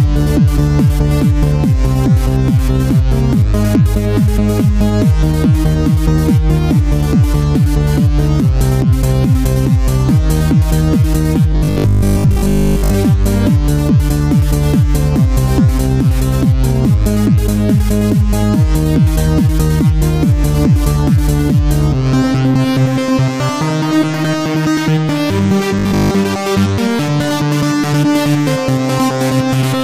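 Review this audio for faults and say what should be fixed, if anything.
A rigid, metallic buzz at a fixed 50 Hz is imposed on the sound from 11.52 to 12.94 s and again from 25.79 to 26.11 s, following its contour only loosely. This is robotic sound from repeated short buffers, likely because new audio arrived too seldom and playback looped the last 20 ms or so, repeating most of the signal while skipping the real audio. A larger jitter buffer or steadier delivery would prevent it.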